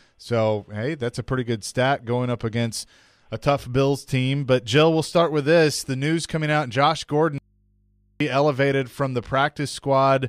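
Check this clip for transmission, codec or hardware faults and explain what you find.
One fault turns up: an audio dropout to a faint residue from 7.38 to 8.20 s. The sound cuts off abruptly mid-flow, and for about 0.82 s all that remains is a low mains hum, roughly 40 dB below the normal level, before the signal snaps back just as suddenly. The likely cause is a brief loss of the wanted signal while the path after the break stayed live, so the open input picked up hum instead of falling silent.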